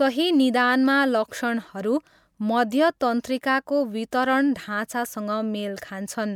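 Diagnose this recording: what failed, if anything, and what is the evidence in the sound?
Nothing failed in this recording.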